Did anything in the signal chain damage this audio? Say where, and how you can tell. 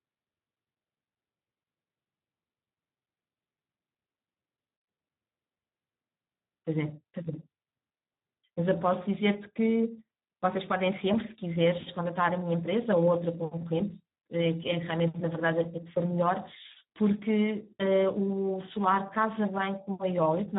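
Yes. The damage sits at the codec stage: the speech passed through the Speex codec at a very low quality setting, and the artefacts run through the whole clip. There is nothing above 3.8 kHz, and the coarse, hoarse texture fits a bitrate around 8 kbps. At that rate the CELP coder has too few bits to describe the excitation, so the voiced buzz underneath the speech is replaced by a rough approximation and the result sounds noisy and hoarse.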